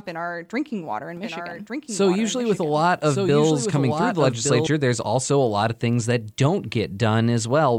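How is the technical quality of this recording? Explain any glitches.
The recording has one clear glitch. From 1.17 to 4.67 s a doubled audio track appears: a second, full-band copy of the speech trails about a second behind, around 5 dB quieter, likely from a slower capture path recording it again. It cuts in and out abruptly, with no reverberant tail, and a spectrogram shows the same formant patterns repeated one second later at slightly lower intensity.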